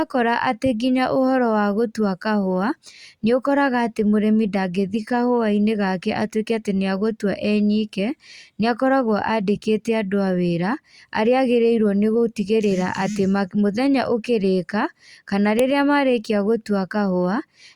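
At 15.59 s there's a sharp, loud click, a file header played as audio. Whoever joined the pieces didn't strip the WAV header from the next one, so those few dozen header bytes get read as samples and pop out as a snap, regardless of the speech underneath.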